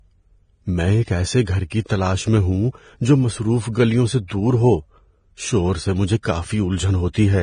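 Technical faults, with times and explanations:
Throughout: Vorbis compression. The speech is hissy and grainy. Nothing is present above 9.7 kHz, and the remaining treble sounds like rough noise instead of clean sibilance and breath. This is likely heavy lossy coding, with a low bitrate around 23 kbps. The encoder quantises the upper spectrum so coarsely that fine detail becomes noise of similar energy. Band-limited noise of this kind separates it from steady background hiss.
1.70 s and 6.23 to 6.25 s: pre-echo. A brief wash of hiss comes before a sharp onset, lasting about 19 ms after "میں ایک ایسے گھر" and about 26 ms after "شور سے مجھے". The codec spreads its quantisation noise across a whole transform block. The noise sized for the loud attack therefore leaks into the quiet moment before it, and the attack sounds softened. The hiss comes before the onset, not after it, which separates it from an echo or reverb tail.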